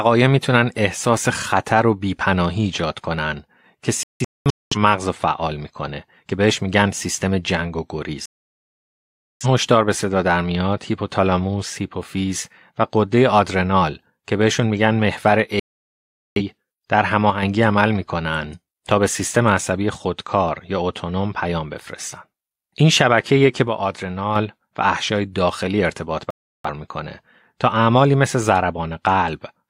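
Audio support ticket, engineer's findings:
Digital broadcast dropout, 4.03–4.76 s: speech breaks into several short holes, about 0.6 s muted across about 0.68 s, longest gap 0.21 s. Receiver muting on frames failing checksum, resuming between bad ones. 8.26–9.46 s: cut, about 1.15 s silent. 15.60–16.42 s: cut of 0.77 s. 26.30–26.69 s: cut of 0.34 s. Each time, the programme continues after the gap. The audio sent during the mute is gone, with no repeat or catch-up.

One channel drops out, 17.30–17.43 s and 23.68–24.36 s: speech level falls abruptly by about 6 dB, then snaps back. Likely loss of one stereo leg ahead of the mono sum. Material common to both channels is halved, and anything carried only in the missing side vanishes. The first instance is a brief dip of about 0.13 s. The second lasts about 0.68 s.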